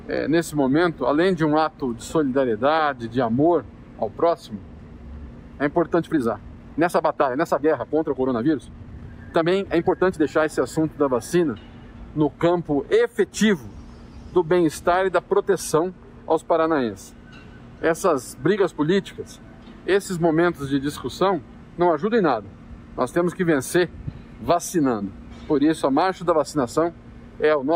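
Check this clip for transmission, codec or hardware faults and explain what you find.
One fault stands out, a time-stretched section from 5.91 to 10.47 s. The audio there runs about 1.39 times faster than the rest, yet its pitch holds steady. Software likely squeezed this stretch to fit a length, dropping short pieces to keep pitch, which leaves it sounding rushed, with abrupt pace changes at both edges.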